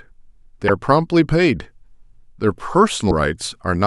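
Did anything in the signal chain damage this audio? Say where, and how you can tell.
Yes. The speech skips briefly at 0.67–0.70 s and 3.10–3.12 s, likely a broken MP3 bit reservoir in the codec: after frames were cut, the decoder read another frame's borrowed bytes.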